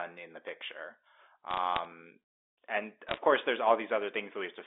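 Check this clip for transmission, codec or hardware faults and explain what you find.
One kind of fault is audible: bit errors on a digital phone line, heard over the band-limited G.711 telephone sound. They come in two bursts, 1.51 to 1.85 s and 3.08 to 3.17 s. Flipped bits corrupt single samples, and hits on high bits give sharp ticks. The first burst is sparse crackle. The second is denser.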